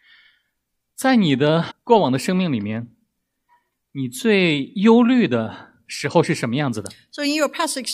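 At 1.70 to 1.72 s there is a brief glitch from damaged data in a compressed stream: corrupted bytes make the decoder misread frames and lose sync until it finds the next frame header.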